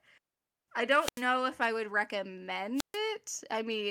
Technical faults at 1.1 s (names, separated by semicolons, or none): wireless microphone squelch dropout